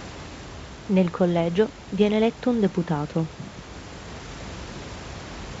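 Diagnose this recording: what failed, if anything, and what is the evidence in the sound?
Nothing stood out on listening to this speech recording, which carries a low room noise about 17 dB beneath the talker and the light upper-band character of G.722 wideband telephone coding at 64 kbit/s.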